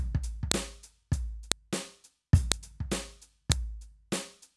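At 0.52, 1.52, 2.52 and 3.52 s the music carries sharp snaps: a file header played as audio, where each 1-second piece's header bytes are reproduced as samples.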